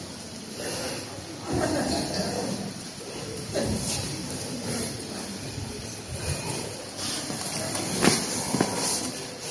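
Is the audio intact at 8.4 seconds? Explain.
Yes, the audio is intact at 8.4 seconds, with no fault audible at that moment.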